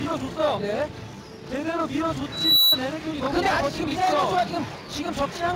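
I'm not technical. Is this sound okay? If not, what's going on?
No. From 2.32 to 2.80 s there is loudspeaker feedback squeal. A microphone picked up the sound coming out of the loudspeaker it was feeding, and that sound went round and round the loop, getting louder each time at one particular pitch. You hear a single high whistle at about 3.9 kHz that swells over roughly a third of a second until it is much louder than the surrounding sound, then stops.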